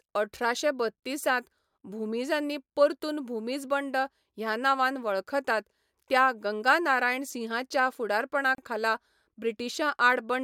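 At 8.55 s the speech drops out abruptly for about 33 ms, to 8.58 s, with smeared edges, then resumes exactly where it stopped. This is a gap at a join of encoded pieces: separately encoded segments were spliced without trimming the encoder's leading delay and final-frame padding.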